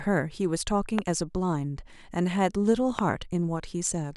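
Loud pops at 0.99–1.01 s and 2.99–3.01 s, roughly 15 and 20 dB above the speech, likely from a voltage spike, show as sharp waveform spikes and full-height vertical spectrogram lines.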